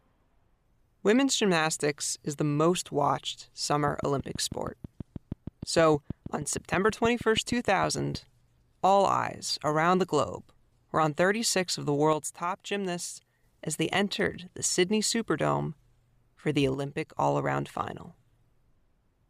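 After "most watched", from 3.88 to 8.16 s, a train of clicks ticks over the speech at a regular 6.3 per second, about thirty in all, peaking about 5 dB above the speech, likely from interference. They show as evenly spaced spikes on the waveform and thin vertical broadband lines on a spectrogram.

Within that stretch, from 6.36 to 6.53 s, one channel drops out, and the level falls abruptly by about 6 dB. It recurs from 12.13 to 13.44 s, between "of the" and "as they entered the", and from 16.74 to 17.17 s, between "for the" and "all around final". The likely cause is a lost stereo channel before the mono sum. The waveform envelope steps down and back up, and the whole spectrogram dims in those spans.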